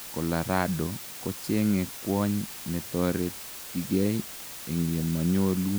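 From start to end, the speech carries low bit depth with dither: 6-bit quantisation with dither turns rounding error into a steady, even hiss roughly 15 dB below the voice.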